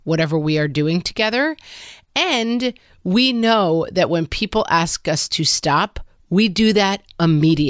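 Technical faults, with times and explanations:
No technical faults detected.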